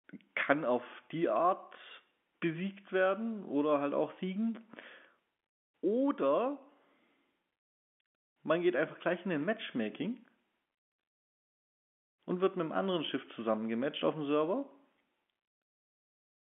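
No faults are audible in this speech; the G.711 telephone path behaves as a narrowband line should, with the band running from about 200 Hz to 3.5 kHz.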